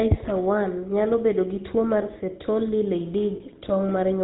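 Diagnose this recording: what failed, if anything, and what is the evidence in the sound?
Codec stage: the whole clip has the GSM full-rate codec's buzzy, gravelly roughness with nothing above 4 kHz, which fits 13 kbps pulse-excited vocal-tract coding.

Network stage: lost GSM frames from 3.36 to 3.41 s leave a brief metallic ring, the last good frame repeated, which fits two dropped frames.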